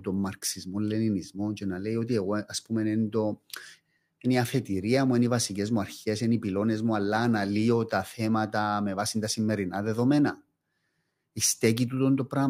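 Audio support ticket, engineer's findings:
Faint regular ticks through the speech, 0.12 s to 12.37 s. Clock slip clicks, roughly every 0.3 s, around 40 in all. Likely two unsynced device clocks, about 70 ppm apart. One sample dropped or repeated per slip.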